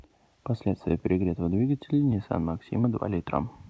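A brief smear at 2.82 to 2.85 s is short concealed packet loss: 20 ms of lost audio, likely, was bridged by extending the preceding speech before blending back.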